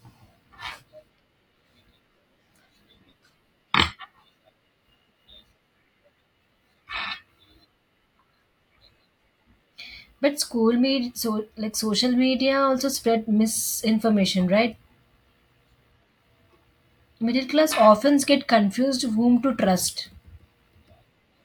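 No technical faults occur at any point in the recording.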